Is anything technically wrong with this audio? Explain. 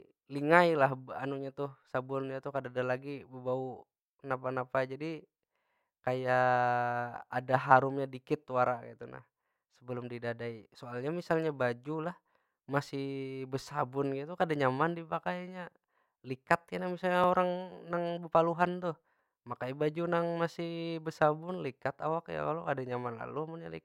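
Yes. The speech has overlapping chunks: at 7.22 s and again at 17.24 s there is a brief click-like stutter where a sliver of sound plays twice. The clip was processed in 10-second chunks, and each new chunk began slightly before the previous one had finished, so about 13 ms of audio repeats at each join. Because the joins fall 10 s apart, the stutters recur at that regular interval.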